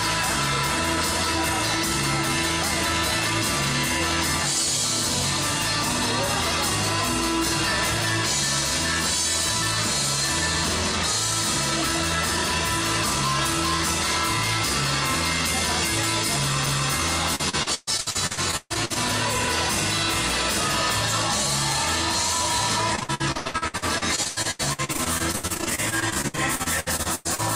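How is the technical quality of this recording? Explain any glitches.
The recording has two stretches of repeated packet loss (robotic sound). The first runs from 17.35 to 18.97 s, and the second from 22.95 to 27.40 s. Packets went missing over and over, and each gap was bridged by extending the preceding sound. This replaced about 41% of the first stretch, with gaps up to 136 ms. It replaced about 36% of the second, with gaps up to 98 ms. The result is choppy audio with pieces lost.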